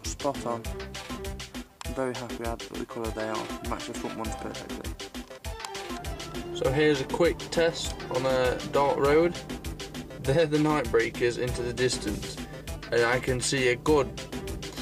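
Nothing stood out as a technical fault at any point on listening to the clip.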